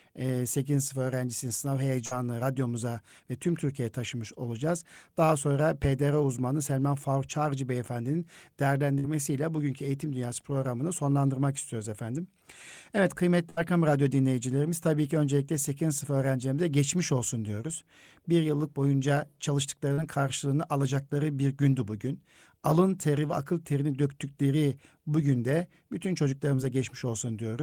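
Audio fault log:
2.05 to 2.13 s, 8.99 to 9.06 s, 13.50 to 13.59 s: burst of packet loss. At each of these points a run of packets arrived too late or not at all, leaving holes of 60, 60 and 80 ms in the speech. The receiver stretched the last received sound across 54, 50 and 71 ms of each gap while turning it down, so it is heard as a held buzz or fading hiss. The speech then jumps ahead, and the missing stretch is lost.
19.93 to 19.99 s, 26.55 to 26.60 s: short concealed packet loss. These are smaller holes of 40 and 20 ms that never reached the decoder. The receiver filled about 43 and 23 ms by continuing the preceding sound, using its pitch where it was voiced and shaped noise where it was not, then crossfaded back into the real signal. Each one sounds like a brief smear or wobble, and a quick consonant there can drop out.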